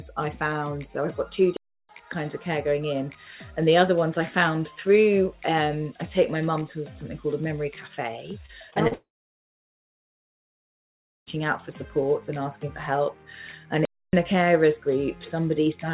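The audio reaches the listener through a call path whose band stops at 4 kHz, which fits G.711 A-law at 64 kbps, and it carries four faults. The player most likely ran dry or was blocked twice, producing a playback stall each time: the sound halts abruptly from 1.57 to 1.89 s (about 0.32 s) and again from 13.85 to 14.13 s (about 0.28 s), then resumes after a noticeable dead gap. Between 8.46 and 8.93 s, repeated packet loss leaves four short holes, the longest 38 ms, each filled by stretching the preceding sound. Roughly a fifth of that stretch is patched, so it sounds choppy and robotic. Immediately afterward a long network dropout follows, likely a sustained loss of incoming packets, from 8.93 to 11.28 s. The receiver briefly extends the last sound as a fading buzz or hiss, then leaves about 2.2 s of silence, and the audio returns with roughly 2.3 s permanently missing.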